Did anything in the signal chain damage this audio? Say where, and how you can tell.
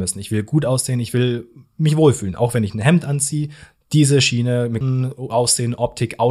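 Yes. At 4.81 s the speech is broken by a brief glitch, the mark of damaged data in a compressed stream at the codec stage. Corrupted bytes made the decoder misread or reject the frame, lose sync and resynchronise at the next valid frame header.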